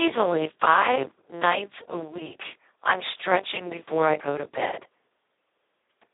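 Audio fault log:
throughout Speex codec: speech sounds hoarse, buzzy and robotic, held to a 300 Hz to 3.7 kHz band with nothing above 3.8 kHz. This fits Speex near 2 kbps, where the excitation gets so few bits that it behaves almost like a vocoder.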